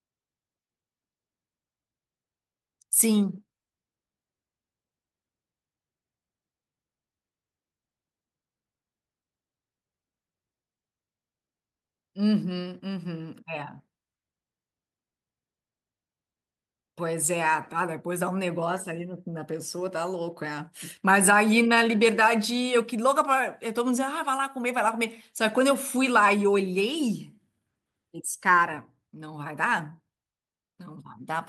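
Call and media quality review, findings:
Call and media quality review findings: no faults found.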